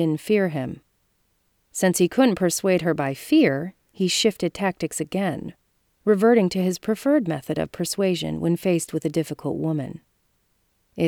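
Nothing is technically wrong with this clip.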